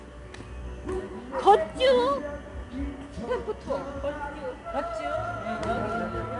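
Throughout, 4-bit ADPCM compression squeezes each sample step into four bits, adding gritty hiss that swells with loud sound. A spectrogram shows level-tracking noise and nothing above 10.7 kHz.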